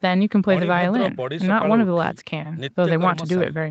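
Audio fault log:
No faults detected.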